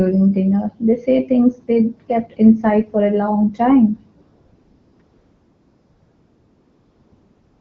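AMR comfort noise appears from 4.21 to 4.99 s, then again from 5.01 s to the end. The phone judged the talker silent and stopped sending speech frames. The receiver filled each gap with smooth synthetic noise, replacing the real background.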